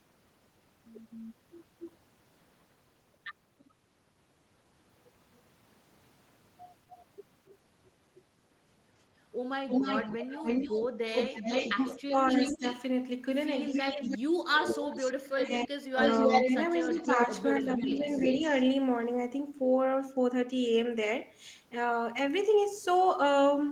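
An echo leak first appears faintly at 6.9–7.52 s: a copy of the speech about 25 dB down returns 278 ms late, likely because a far-end loudspeaker echo slipped past an echo canceller. It returns much stronger, only about 5 dB below the speech, at 9.69–12.82 s (294 ms delay) and 13.65–18.62 s (313 ms delay). On a spectrogram it looks like duplicated harmonic patterns offset in time.

Speech suppressed in double talk overlaps these stretches. At 11.96–12.64 s the level dips by up to about 15 dB for roughly a fifth of a second. At 13.7–15.99 s it is gouged by as much as 40 dB for about 1.5 s. At 16.89–18.42 s it dips by around 10 dB for about half a second. Each is likely the canceller cutting gain while both ends talk. The waveform envelope shows abrupt notches.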